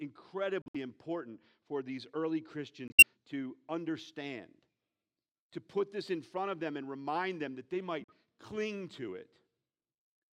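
Corrupt frame muted, three times: 0.62 to 0.76 s before "important for these early", 2.88 to 3.03 s before "to understand", and 8.0 to 8.12 s before "cling to". Damaged compressed frames got thrown out and replaced with silence, so you hear abrupt holes of roughly a tenth of a second with no drift in timing.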